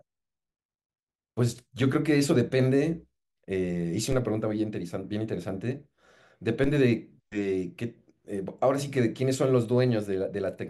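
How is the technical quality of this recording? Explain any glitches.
The speech carries two DC steps, at 4.12 s and 6.64 s. Each time the waveform's zero line jumps by about -23 dBFS and then drains away through a 5 Hz high-pass, giving a low thump. Unlike a dropout or splice click, the speech runs through unbroken.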